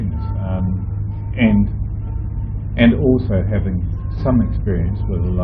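No technical faults can be heard anywhere in the clip, so there is nothing to place in time order.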